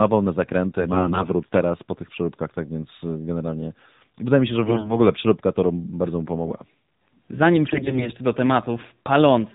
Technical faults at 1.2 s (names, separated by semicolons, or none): AMR narrowband mobile codec; AMR bit errors